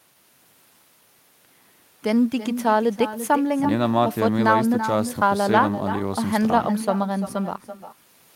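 From start to finish, every phrase is trailed by a fainter, thinner copy arriving around 300 ms later at about 11 dB below the speech. That is echo with no canceller: the far end's loudspeaker feeds its microphone, and nothing strips the returning signal.

Throughout, the timing feels faintly uneven, with small hiccups at irregular gaps. This points to clock drift between sender and receiver, with the sender's clock running roughly 2 percent slow, so the receiving jitter buffer keeps draining and has to be topped up.

From 0.14 s to 8.25 s, the pace sags slightly and stutters unevenly, running at 98 percent speed and stretching the audio by something like 150 ms overall. These are repeated timing corrections, with the receiver repeatedly inserting short repeated pieces to keep pace with the slower sender.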